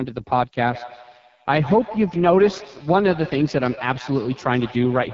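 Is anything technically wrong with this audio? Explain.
Yes, there are two faults. Throughout, the speech has heavy damage from the AMR wideband (HD Voice) codec. The pulse-driven vocal tract model is starved of bits, which fits its lowest 6.6 kbit/s mode, so voiced sounds turn rough and raspy. Shaped noise fills the top band, and nothing reaches above 7.5 kHz. The extra top band and the raspiness set it apart from a narrowband phone codec.

From 0.63 s to the end there is a feedback echo between two devices. One device replays what the other's microphone sent, and that microphone picks it up again. Each phrase returns about every 150 ms, thinner and more ringing, at about 14 dB below the speech. Because the repeats come at a fixed spacing, it is not room reverberation.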